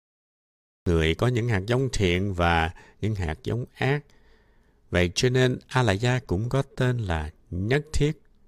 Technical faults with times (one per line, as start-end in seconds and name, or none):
0.00-0.86 cut-off start